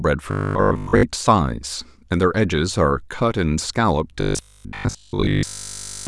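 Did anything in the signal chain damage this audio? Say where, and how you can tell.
Yes. Robotic sound from repeated short buffers occurs at 0.31–1.03 s and 4.21–6.07 s as a rigid 50 Hz buzz. That pitch fits a 20 ms block replayed by a likely starved driver buffer, covering most of the first stretch and all of the second.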